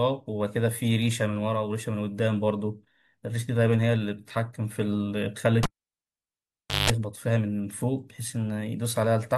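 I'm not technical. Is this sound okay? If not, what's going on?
No. At 5.63 s a cable was pulled and plugged in while live. There's a pop, then about 1.2 seconds of near silence, then a short 50 Hz mains buzz, roughly 0.18 s, as the plug's tip touches first, and another pop at 6.90 s.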